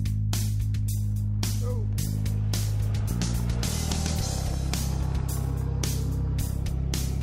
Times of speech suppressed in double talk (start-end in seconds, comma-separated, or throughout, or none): none